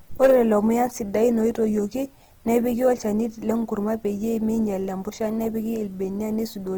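From 0.21 to 0.57 s the speech suffers hard clipping. A stage was driven about 6 dB past its limit, so the peaks were cut flat. The flattened tops add high harmonics.

Throughout the clip, grainy, rough textures point to Opus compression, likely in its CELT music mode. Short of bits, the encoder filled bands by folding or with noise. The damage is plainly audible, which fits a low rate around 16 kbps. Content reaches about 20.2 kHz.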